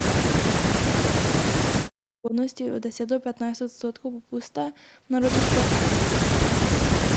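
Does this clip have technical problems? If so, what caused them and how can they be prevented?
Yes. From the start to about 2.34 s the speech sinks and breaks up, ducking by as much as roughly 40 dB and cutting out in pieces for about two seconds in all. This is likely speech suppressed in double talk: with both sides talking at once, the echo canceller could not tell this talker apart from the loudspeaker echo and turned everything down. A headset, or an echo canceller tuned to hold near-end speech during double talk, prevents it.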